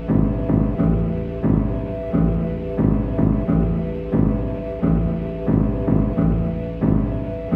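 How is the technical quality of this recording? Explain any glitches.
The music carries one fault throughout: sample clock jitter. An unstable converter clock, wandering by a microsecond or so, mistimes samples, leaving a faint hiss, roughly 50 dB down, that swells on loud, bright passages.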